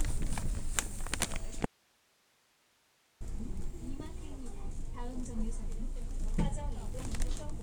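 At 1.66 s the sound cuts out abruptly, leaving only faint hiss far below the signal until 3.21 s, a dropout to a faint residue, likely from a broken feed.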